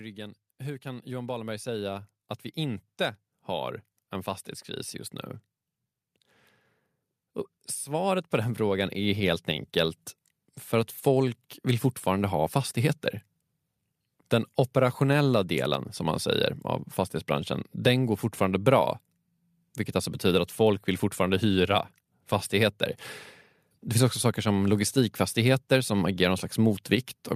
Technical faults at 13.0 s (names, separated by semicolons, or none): none